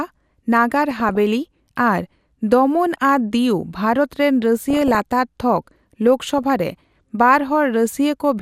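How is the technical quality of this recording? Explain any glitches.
The speech suffers from DAB burbling in four bursts: 0.84–1.17 s, 2.94–3.06 s, 4.70–5.00 s and 6.38–6.79 s. Weak reception let bit errors slip past error correction into the MP2 data, corrupting samples and scale factors, which fits an error rate of a few tenths of a percent. This produces short blips of noise in single sub-bands over the voice.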